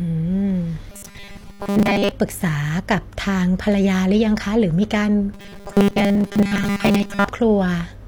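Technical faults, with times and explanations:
0.90–2.11 s and 5.34–7.28 s: robotic sound from repeated short buffers. The speech turns into a stiff, metallic buzz fixed at 200 Hz, though it still loosely tracks the words. The likely cause is audio arriving too slowly, so the playback fills gaps by looping one short slice. A 200 Hz buzz fits a slice of about 5 ms. Most of the real audio is skipped while the slice loops.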